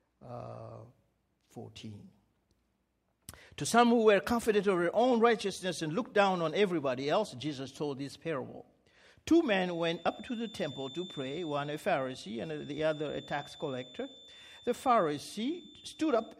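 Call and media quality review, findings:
Feedback whistle, 9.57 s to end of clip. Likely cause: loudspeaker-to-microphone loop sitting right at the edge of oscillation, loop gain just short of runaway. Result: thin, steady 3.5 kHz tone behind the sound, well below main level, level swelling and fading slowly.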